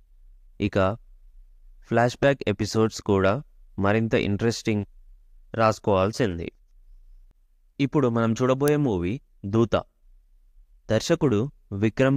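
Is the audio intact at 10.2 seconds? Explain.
Yes, the audio is intact at 10.2 seconds, with no dropout, click, distortion or other fault audible at that point.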